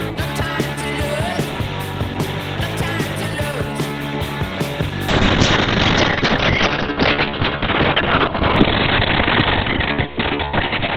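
A call bitrate drop begins at 5.09 s and runs to the end. The connection's bandwidth estimate fell, and the encoder cut from 32 kbps to 6 kbps, staying lowest for 4.2 s. Coarser coding and a band shrunk from 20 kHz to 4 kHz leave the sound rough and muffled.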